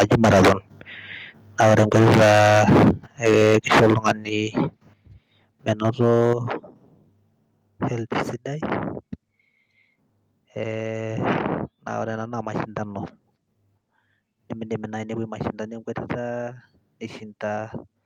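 Microphone overload runs from 0.0 to 0.53 s and 1.6 to 2.91 s, about 15 dB past full scale with roughly a third of samples flattened. From 3.24 to 4.12 s it is about 11 dB over. The likely cause is input gain high enough that the converter shaves off peak tops, giving loud syllables a harsh crackle.

Microphone volume stepped down at 3.3 s by about 2 dB and at 4.29 s by about 6 dB, with voice and background dropping together. The likely cause is call software cutting device gain after detecting clipping.

A milder overload, about 5 dB over, follows from 5.68 to 6.33 s. At 6.33 s the level steps down again by about 8 dB.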